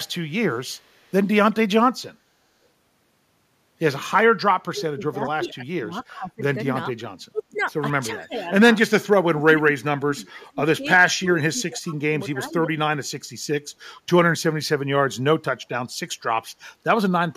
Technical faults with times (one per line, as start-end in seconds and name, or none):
0.52-1.13 echo leak
4.64-7.03 speech suppressed in double talk
4.77-4.81 echo leak
7.30-7.69 speech suppressed in double talk
8.12-8.53 speech suppressed in double talk
9.28-12.70 speech suppressed in double talk